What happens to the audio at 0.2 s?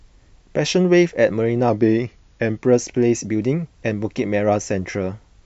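At 0.2 s the speech plays through cleanly, with no dropout, click, distortion or other fault at that point.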